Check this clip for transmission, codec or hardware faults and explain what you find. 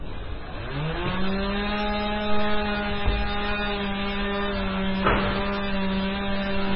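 One fault runs through the whole clip: heavy damage consistent with MP3 compression, likely from encoding at a very low bitrate, with the sound pointing to something around 16 kbps. Nothing is present above 5.5 kHz, where the encoder has cut the treble to save bits. Below that, weak frequency lines drop in and out from frame to frame, giving a watery, swirling texture, with metallic chirps on bright content and smeared attacks.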